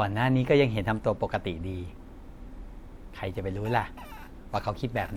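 No technical faults are audible anywhere in the speech.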